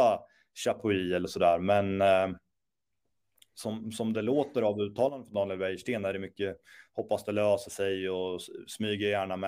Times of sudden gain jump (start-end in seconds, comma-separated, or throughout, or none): 0.80-2.39, 5.09-5.34